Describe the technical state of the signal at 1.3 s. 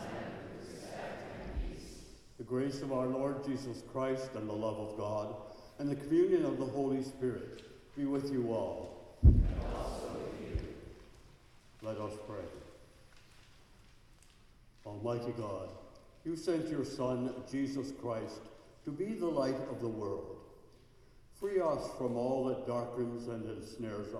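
At 1.3 s the signal is intact, with no audible technical fault at that moment.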